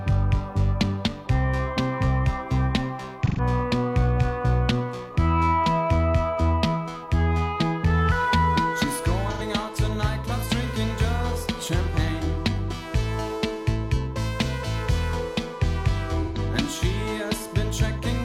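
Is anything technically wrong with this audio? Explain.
Yes, there are three short dropouts from AAC frame loss with concealment, at 3.26 to 3.40 s, 9.31 to 9.42 s and 16.22 to 16.38 s. That's gaps of about 128 ms, 85 ms and 128 ms, which fits two or three lost AAC frames each time. The decoder papers over the hole by reusing the last good spectrum with shuffled phase, so each spot comes out as a brief smeared, noisy or phasey patch rather than true silence.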